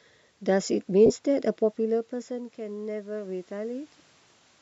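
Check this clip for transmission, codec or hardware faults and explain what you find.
Two faults turn up, one transmission dropout and one level problem.

From 1.06 to 1.11 s there are lost LE Audio frames: roughly 37.5 ms went missing, about five LC3 frames' worth. The decoder patched the gap by repeating the last spectrum with scrambled phase, so you hear a brief noisy smear.

From 2.27 to 3.99 s the automatic gain is rising. The input dropped by about 16 dB, and the AGC slowly pushed its gain up about 4 dB, so voice and room noise swell together.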